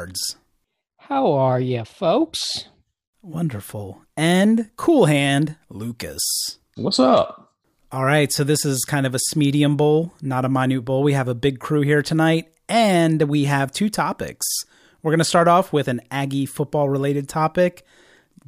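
No technical faults can be heard anywhere in this speech recording; the signal stays steady and intact from beginning to end.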